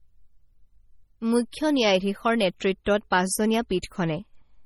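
The whole clip carries heavy damage from what is likely MP3 compression. The treble stops dead at about 18.4 kHz. Weak frequency detail flickers in and out from frame to frame. That gives the speech a watery, swirling texture. S sounds turn metallic and chirpy. Attacks lose their edge. The depth of the damage fits a very low bitrate, around 32 kbps. The encoder had too few bits and dropped whatever its hearing model judged least audible.

Pre-echo appears at 1.51, 2.59, 2.84, 3.10 and 3.82 s. Each time, a short hiss runs just ahead of a sharp onset. It lasts between 12 and 19 ms. The codec spreads its noise across a whole transform block. When the attack lands late in that block, noise scaled for the loud part leaks into the quiet moment before it. The onsets sound blurred and soft.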